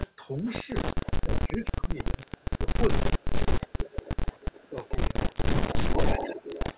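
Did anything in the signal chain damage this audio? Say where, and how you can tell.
Yes. Echo leak in the call processing. A faint copy trails the voice by 386 ms at 0.06–0.52, 1.05–1.11 and 2.29–2.45 s. From 3.09 s to the end, a copy nearly as loud as the voice trails by 435 ms. The likely cause is an echo canceller passing loudspeaker pickup back down the line.

Speech suppressed in double talk, also in call processing. Between 1.22 and 4.78 s the voice drops out in pieces, by up to about 20 dB. At 5.87–6.59 s it dips by about 10 dB. The canceller likely mistook the talker for echo and turned both down.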